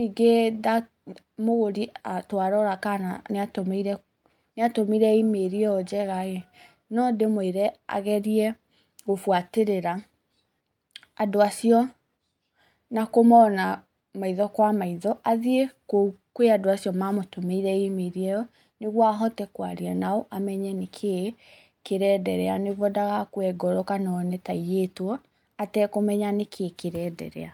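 No technical fault can be heard anywhere in this recording of speech, and the signal holds steady throughout without any audible disturbance.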